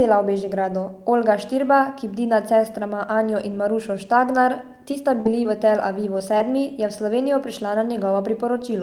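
A speech clip with short concealed packet loss at 4.91, 5.43, 6.18 and 6.38 s (just before "je v"): each is a brief smear or wobble where about 20 ms went missing and the decoder stretched the preceding sound to cover it. A burst of packet loss follows "ti sta" from 5.21 to 5.27 s. About 40 ms was lost, and the decoder's fill audibly fades as a held buzz or hiss before speech resumes further on. That fade and the skipped audio set it apart from the momentary smears.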